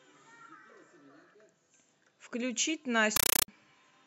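At 3.16 s the speech gives way to a compressed stream played as audio until 3.48 s. An AC-3 bitstream, plausibly around 384 kbps, got treated as plain samples, so you hear harsh, loud static chattering at 31.25 Hz, each 8 ms noise burst followed by silence.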